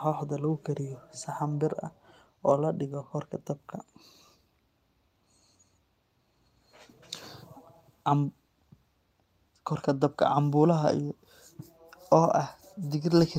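No technical faults can be heard anywhere in this speech recording. At no point does any interruption, distortion or other problem stand out.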